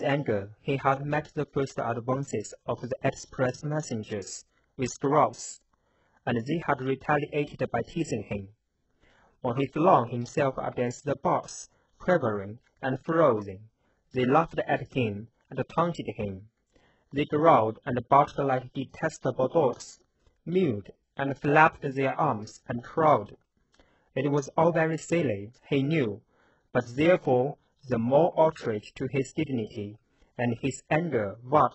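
From start to finish the speech sounds heavily processed: sibilants come out gritty and lispy, the upper range has a metallic sheen, and nothing is heard above 8 kHz. The likely cause is HE-AAC compression at a very low bitrate, fitting roughly 8 kbps. Here the codec keeps only the lower spectrum and synthesises the treble by copying lower bands upward under a coarse envelope, so the rebuilt harmonics don't line up with the real ones.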